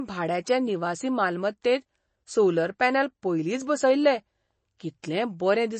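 Throughout the speech, bits were likely starved by MP3 compression, fitting about 32 kbps: nothing survives above 8.3 kHz, and the sound turns plainly watery and swirly. At 4.79 s and again at 5.02 s, pre-echo occurs as codec noise spreads ahead of sharp attacks, adding a brief hiss of about 11 to 12 ms before each.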